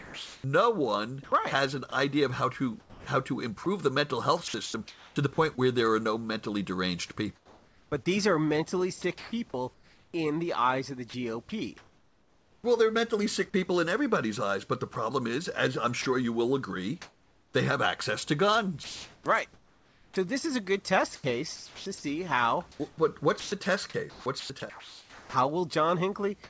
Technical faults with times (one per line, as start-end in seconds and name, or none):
0.00-5.60 sound chopped by the voice detector
7.36-12.64 sound chopped by the voice detector
14.94-17.54 sound chopped by the voice detector
18.84-25.34 sound chopped by the voice detector